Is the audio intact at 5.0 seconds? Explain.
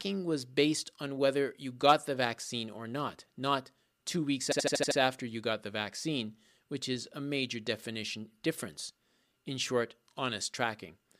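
No. Repeated frames run from 4.51 to 4.98 s, between "not not two weeks" and "after you got the". A 78.4 ms block, likely three compressed frames, replays six extra times, giving a stuttering loop and adding 470 ms.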